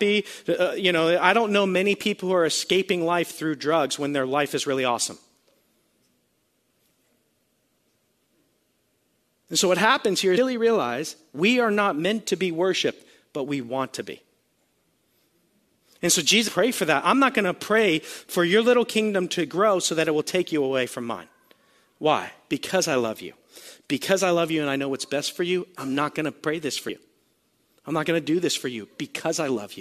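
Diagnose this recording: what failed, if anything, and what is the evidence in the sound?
The failure is at the codec stage: damaged data in a compressed stream at 10.37 s, right after "so what happens here" and before "realize we are not". Corrupted bytes there made the decoder misread or discard frames and lose sync, hunting for the next valid header before speech resumes.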